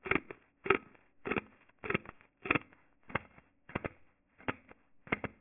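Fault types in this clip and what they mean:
Aliasing: the sample rate was cut, which fits a drop from 48 kHz to 6 kHz, with no filter beforehand, so everything above 3 kHz folds back below it as unrelated tones, about 5 dB under the real sound, making the clip gritty and metallic.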